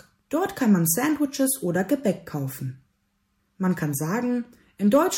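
Hard clipping appears from 4.94 to 4.98 s, a brief overload lasting about 30 ms near the end of the clip. For that moment the signal runs roughly 2 dB past what a stage in the chain can pass, so the peaks are sheared off flat instead of following their true shape. Those squared-off tops generate harmonics well up the spectrum, heard as a short, dry crackle riding on the loudest part of the sound.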